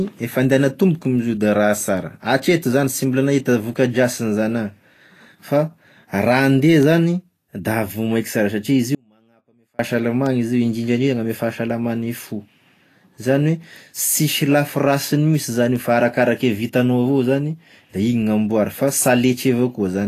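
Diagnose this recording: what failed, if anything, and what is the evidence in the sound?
Vorbis compression, throughout the clip. The speech is hissy and grainy, with roughened tones and smeared consonant attacks, and nothing is present above 14.2 kHz. This points to a codec stage, likely Vorbis at a low bitrate around 34 kbps. At that rate the encoder lowers its cut-off and quantises the treble residue so coarsely that fine detail is replaced by noise of similar energy, and that noise is the grain heard on top of the voice.

Audio dropout to a faint residue, from 8.95 s to 9.79 s. The speech cuts out abruptly for about 0.84 s and returns just as suddenly. The gap is not silent: a faint sound remains, roughly 40 dB below the signal's normal level. That pattern points to a likely break at the driver or buffer stage. The wanted signal stopped arriving while the path after the break stayed live and carried only a faint residue.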